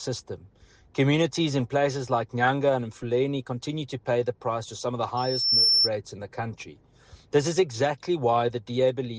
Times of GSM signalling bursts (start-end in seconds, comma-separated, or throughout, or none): none